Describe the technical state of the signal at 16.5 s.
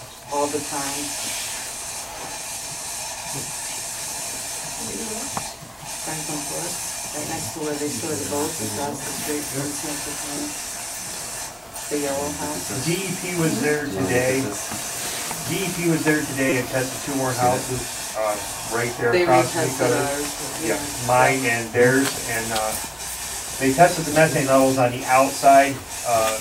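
At 16.5 s there is a repeated buffer, running from 16.50 to 16.52 s. Fresh audio failed to reach the output in time, so the same short block played again. It sounds four extra times, each segment about 5.8 ms long, which fits a 256-sample buffer. Each repeat meets the next with a hard join. With segments this small, the stutter comes across as a brief buzz or click. Roughly 20 ms of the real signal is lost.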